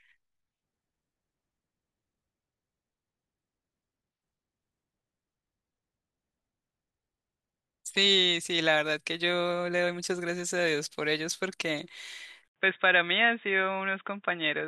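A speech recording whose sound turns abruptly dull and boxy at 12.48 s and stays that way to the end at 14.68 s, most likely because the input switched to a poorer device. An 80 ms silence marks the switch as a flat gap in the waveform, though overall loudness barely changes. On a spectrogram, everything above 3.8 kHz vanishes from that point, and a faint new noise floor appears far below the speech.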